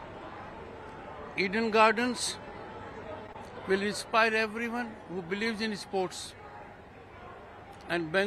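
From 3.27 to 3.31 s the sound holds slightly too long with a faint buzz or dip, a short stall from a late packet: the jitter buffer emptied, so the last sound was stretched about 19 ms until the packet arrived. Just after, from 3.33 to 3.36 s, a brief smear replaces about 20 ms that never arrived in time, a short concealed packet loss filled by continuing the preceding sound.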